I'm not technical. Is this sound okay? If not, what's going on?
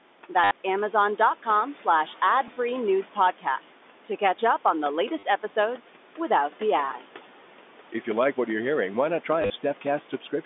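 No. Throughout, a noise suppressor is holding the background down, and its noise suppressor artifacts show as background noise that dips between phrases and rises under the speech. Unlike plain room noise, it pumps with the talking instead of staying steady.

Packet loss with last packet repeated causes four brief robotic stutters: at 0.44 to 0.51 s, at 2.48 to 2.56 s just before "news podcasts", at 5.19 to 5.23 s between "up on the" and "episodes without the ads", and at 9.42 to 9.5 s right after "hearing why not try". Each one is a buzz where a tiny slice of sound repeats to fill a gap. This is not a clean dropout to silence.

Speech cut by the noise suppressor affects the last moments, from 10.1 s to the end at about 10.45 s. The suppressor mistakes parts of the speech for background noise, so bits of the closing sound come out faint or swallowed. It is a level drop, not a stutter.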